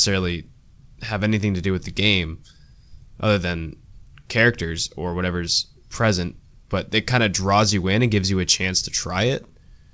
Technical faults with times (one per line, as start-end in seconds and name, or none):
0.00-9.94 clock drift between sender and receiver
0.68-9.51 repeated timing corrections